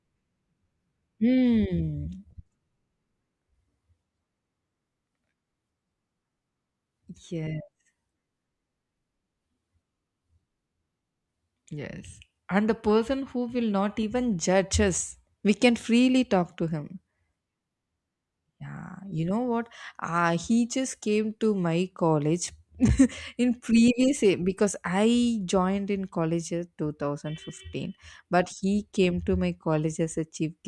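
Nothing goes wrong anywhere in the speech recording, so there's no fault to point to at any moment.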